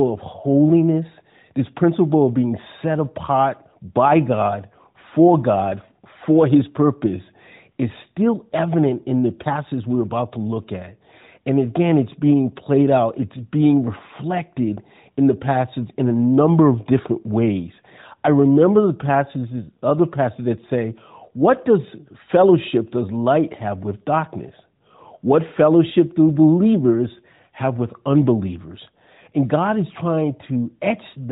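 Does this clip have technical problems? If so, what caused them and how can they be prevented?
No, the speech carries no technical faults; it has passed through the AMR narrowband mobile codec, whose top limit near 4 kHz and light coding character fit its highest 12.2 kbps mode.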